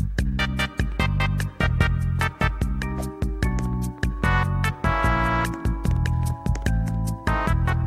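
From 2.98 s to 4.24 s, a train of clicks runs over the sound. About seven sharp pulses arrive at a steady four per second, evenly spaced and much alike in shape. Each click peaks at roughly the level of the sound beneath it and is heard as a ticking pop, including in any gaps. The cause is likely outside interference or a faulty connection or power supply injecting the pulses into the signal.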